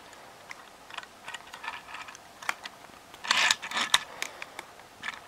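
At 4.05 s there is a brief, grainy blur lasting about 10 ms, where the sound loses its clean tonal detail and turns into a short noisy smear. This is lost LE Audio frames: a gap in the Bluetooth LE Audio stream, consistent with a single missing frame. The LC3 decoder filled the hole by repeating the previous spectrum with randomised signs, which keeps the level steady but scrambles the tone.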